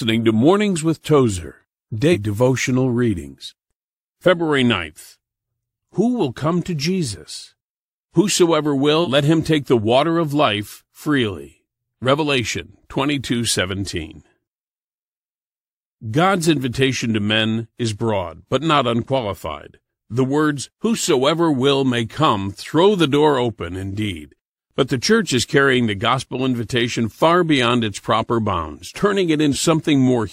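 Speech, with compressed frames skipped at three points: 2.12–2.16 s, just before "devotional readings"; 9.03–9.08 s, just before "let him take the"; and 29.51–29.56 s. At each point the audio jumps ahead, by about 200 ms, 150 ms and 100 ms respectively. That fits a handful of whole 46.4 ms frames that were absent from the file or discarded by the decoder as corrupt.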